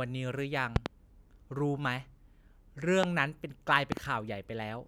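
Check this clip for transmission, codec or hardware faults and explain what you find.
Three loud pops, most likely from sudden voltage spikes entering the chain that later circuits shape into sharp pulses: a double pop at 0.76–0.88 s, a single at 3.03–3.06 s, and another double at 3.92–3.99 s. Each jumps well above the speech, which carries on underneath.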